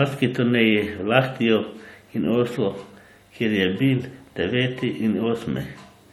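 Speech, with a transcoding between lossy codecs fault running through the whole clip. Two layers of coding artefacts are heard together. The sound points to 64 kbit/s MP3 re-encoded as 64 kbit/s AAC-LC, likely. Nothing is present above 20 kHz.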